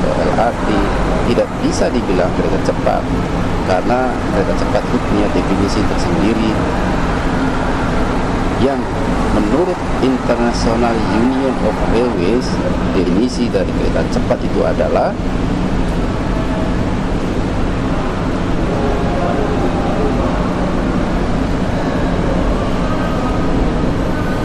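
A brief glitch at 13.05 s and again at 23.64 s, where the sound leaps ahead about 150 ms and then about 100 ms: compressed frames skipped. The jumps suggest roughly seven and five whole 23.2 ms frames dropped.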